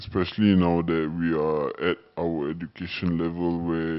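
The clip is speech, and it plays too slow and too low throughout. This is a wrong sample rate fault. Speed drops to 0.726 times normal, and pitch falls about 5.55 semitones. That ratio fits 44.1 kHz audio played back at 32 kHz without conversion.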